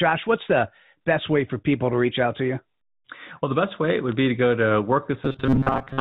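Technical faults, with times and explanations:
1.73 s and 4.12 s: bit errors on a digital phone line. Flipped bits corrupt single samples, so each spot gives a brief tick over the speech.
5.25 s to 6.01 s: robotic sound from repeated short buffers. The speech becomes a rigid 134 Hz buzz, likely from about 7.5 ms buffers repeating while most real audio is skipped.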